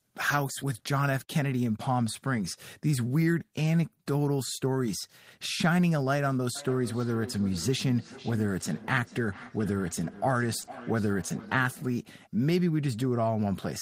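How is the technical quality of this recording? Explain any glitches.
The recording has two kinds of glitch: a repeating echo through the second half, and a brief dropout inside that stretch.

From 6.55 to 12.06 s each word comes back at a steady interval of roughly four-tenths of a second, thinner and more ringing than the original, peaking at about 17 dB below the speech. This is feedback echo between two devices. A second device in the same room plays this call aloud, and this microphone picks it up again. The local echo canceller only removes what its own device plays, so the returned sound passes through.

At 10.61–10.65 s and again at 10.65–10.69 s, two back-to-back gaps of about 20 ms each produce a quick smear or wobble in the speech. This is short concealed packet loss. That audio arrived too late to decode, so the receiver extended the preceding sound over each hole, following its pitch if voiced or using shaped noise if not, then blended back into the real signal.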